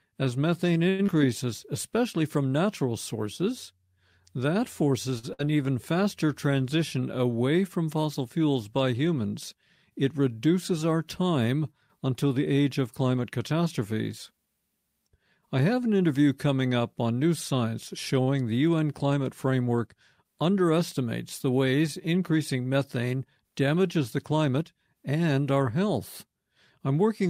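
At 0.89 s there is a short stall from a late packet, lasting until 1.01 s. A packet arrived after its playout time. The jitter buffer ran dry. The receiver stretched the last sound for 94 ms and then resumed where it had stopped. No speech is lost. One sound is simply held too long, with a faint buzzy sag. Playout now runs 94 ms later.

From 1.07 to 1.10 s comes a short concealed packet loss, just before "especially from natural sources". About 40 ms of speech never reached the decoder in time. Only 9 ms was filled with an extension of the preceding sound. It blends back quickly, so it is heard as a quick smear or wobble, and a brief sound can drop out. This also pulls the delay back by roughly 30 ms.

A second short stall runs from 5.19 to 5.25 s. The last sound is held for 45 ms, with nothing missing.

From 5.33 to 5.41 s there is a burst of packet loss, right before "even faster transition away". 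Packets were lost or came too late to play. The receiver continued the last sound for 55 ms and faded it as the gap went on, giving a held buzz or fading hiss. Then speech picks up 60 ms further on. That stretch is gone.

From 10.03 to 14.47 s there is a jitter buffer speed-up. Too much audio had piled up in the buffer. To trim the delay, the receiver repeatedly cut out pitch-period-sized slices, about 150 ms in total. Speech plays at 103% speed with unchanged pitch.

At 18.23 s a third short stall from a late packet holds the sound for 39 ms, until 18.29 s. Nothing is lost.

From 23.97 to 24.54 s, just before "and our health", a second jitter buffer speed-up runs at 106%. It removes about 40 ms. This one is briefer but faster, so the phrase sounds hurried.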